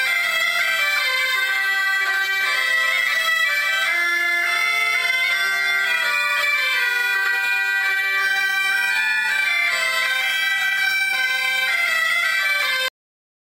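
The audio has a cut-off end at 12.88 s. It stops mid-sound and drops straight to digital silence with no decay. The final buffers were never written or played.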